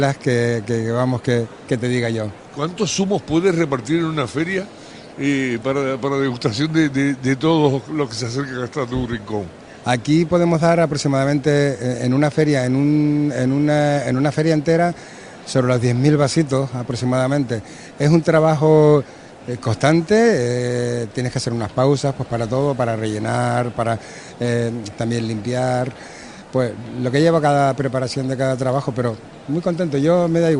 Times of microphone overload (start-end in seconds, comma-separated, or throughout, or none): none